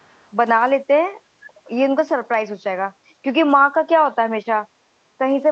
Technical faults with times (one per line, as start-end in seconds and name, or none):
0.00-0.30 echo leak
1.57-1.68 background gated by the echo canceller